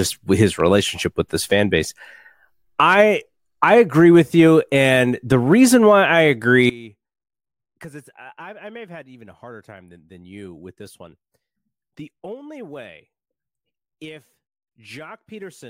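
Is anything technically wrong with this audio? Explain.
Yes. From 6.70 s to the end, the speech drops by about 22 dB, with its centred body nearly gone. The likely cause is one channel inverted: with one side's polarity reversed, content common to both channels cancels when summed, leaving only a faint difference signal.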